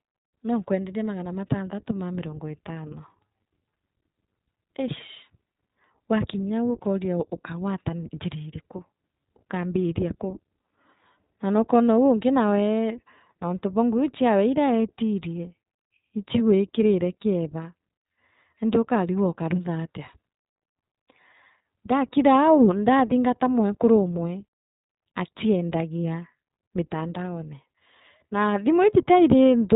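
From start to finish, the speech has passed through the iLBC codec, with each short frame of excitation coded on its own, which fits 20 ms frames at about 15 kbps. Nothing above 3.8 kHz survives, so the voice sounds muffled, plainly rough and slightly synthetic.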